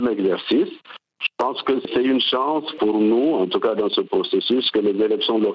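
Gain pumping runs throughout: the gain swings by roughly 20 dB, pulled down under each loud sound, likely from excessive input gain driving a fast limiter.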